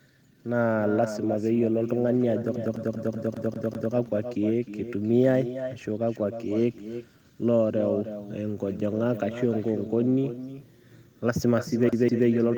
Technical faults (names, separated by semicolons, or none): echo with no canceller; CD stuck on one turn